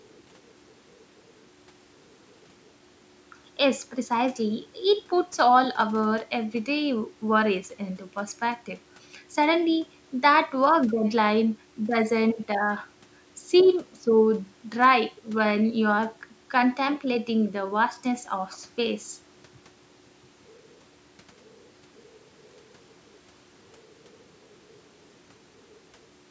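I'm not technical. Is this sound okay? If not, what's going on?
Yes, this sound is fine.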